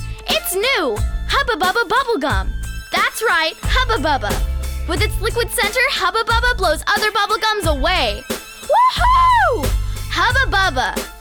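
Hard clipping runs through the whole clip. The level is pushed about 2 dB past what a stage can pass, so only a small fraction of samples, around half a percent, hit the ceiling and get flattened. You hear it as brief crackle riding on the loudest peaks.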